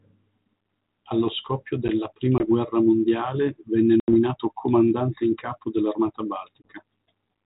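Packet loss on an ADPCM call occurs three times: at 2.38 to 2.43 s after "scoppio della", at 4.00 to 4.14 s after "guerra mondiale venne", and at 6.62 to 6.67 s. The gaps are 20 ms, 80 ms and 20 ms, which suggests one packet, then about four, then one. Each gap is abrupt silence. The decoder's predictor and step size drift from the sender's, so speech resumes over the 32 kbit/s G.726 link slightly distorted for some tens of milliseconds.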